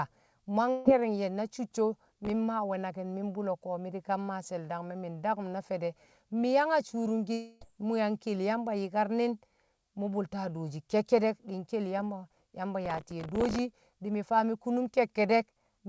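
From 0.71 to 0.86 s, a burst of packet loss removes about 150 ms of speech; the receiver fills the gap with a fading continuation of the last sound before speech resumes further on. Between 2.09 and 2.30 s, a processor overload crackle appears: about 7 audio buffers, each about 1.5 ms, miss their deadlines and replay old audio with hard edges, producing gritty tearing. From 7.33 to 7.62 s, the last sound is stretched into a fading continuation lasting about 280 ms, and the speech picks up later with that stretch gone, likely a long network dropout. The same overload crackle returns from 12.85 to 13.59 s, longer and denser this time, and clears just before "di̱ faa". Throughout, the G.722 call path holds everything to 8 kHz and below.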